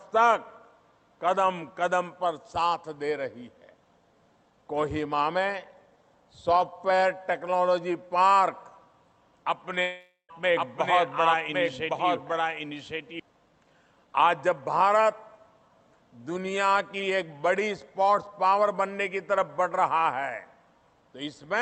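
From 9.81 to 10.31 s there is a long network dropout: about 0.48 s of audio likely never arrived. The last sound is stretched into a fading buzz for roughly 0.47 s, then near-silence. Unlike a short glitch, the lost part never returns.

From 10.56 to 13.20 s a doubled audio track appears, likely from a second, slower capture path. A full-band copy about 5 dB quieter trails by roughly one second, with no decay or room colour, so it is not an echo, and it starts and stops abruptly.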